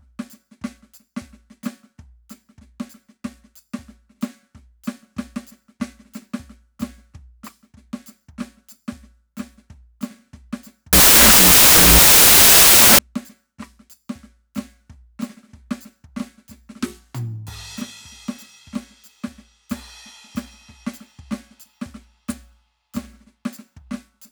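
A music clip. From 10.93 to 12.99 s, samples built from the wrong bytes turn it into loud, harsh broadband noise. Misassembled bytes make the low bits dominate.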